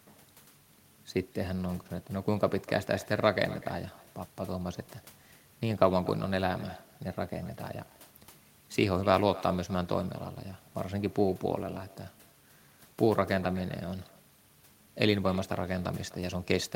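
All the way through, there's echo with no canceller: the far end's speaker leaks into its mic, so every phrase returns about 20 dB down, roughly a third of a second late, and thin.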